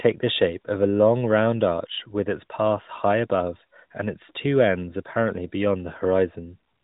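No technical faults can be heard anywhere in the recording.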